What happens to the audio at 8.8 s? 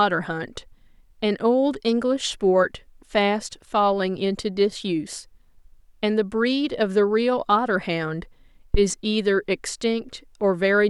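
Right around there, from 8.74 to 8.82 s, there's a phantom power thump. Someone switched phantom or another supply on a live input, and that sudden DC step pushed through the coupling capacitors into the signal. You hear it as a deep, low thud that peaks at about -7 dBFS and dies away quickly, with a decay of about 18 ms, so it's a short knock.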